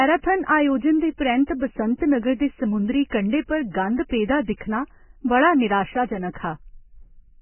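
Vorbis compression, likely the cause, runs through the whole speech recording. Nothing is heard above 3 kHz, so sibilants and breath lose their sheen and the sound turns dull and band-limited. Below that cut-off the damage is heavy: the encoder kept only a coarse spectral outline and replaced much of the upper detail with noise of similar energy, giving a hissy, grainy texture, roughened tone and softened consonant onsets, consistent with a very low bitrate near 9 kbps.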